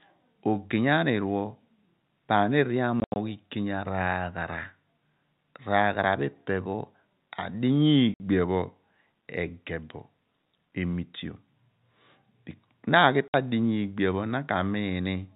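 Packet loss filled with silence at 3.0–3.16 s, 8.14–8.2 s and 13.29–13.34 s: missing packets, consistent with 20 ms packets, leave hard-edged gaps of 120, 60 and 60 ms in the G.711 telephone-band speech.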